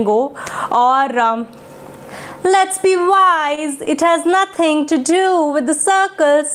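Between 3.55 and 4.57 s there are scattered short gaps: about five brief packet losses, none longer than about 20 ms, each patched by extending the preceding sound. They show as tiny smeared or repeated slivers in the spectrogram and small ticks in the waveform. From 4.81 to 5.48 s a jitter buffer slow-down adds 50 ms. The audio plays at 94% speed, with the pitch unchanged, because single periods were repeated, and the waveform shows stretched, near-identical cycles.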